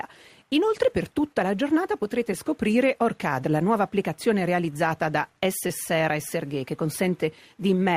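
Short concealed packet loss appears at 5.67 to 5.71 s. About 20 ms of audio failed to reach the decoder in time, and the receiver filled roughly 18 ms of that gap by extending the preceding sound, continuing its pitch where it was tonal and substituting shaped noise where it was not, before crossfading back into the real signal. The result is a brief smear or wobble lasting a few hundredths of a second.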